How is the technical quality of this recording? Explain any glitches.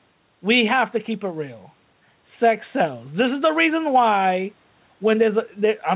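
The recording has one fault, gain pumping, running through the whole clip. The speech is band-limited, with nothing above 4 kHz, which fits a G.711 telephone codec at 64 kbps. Faint room noise sits about 44 dB below the speech.

Gain pumping, throughout: the gain swings by around 5 dB, squashing loud and soft parts closer together. The likely cause is input gain set too high, with a fast limiter repeatedly pulling it down.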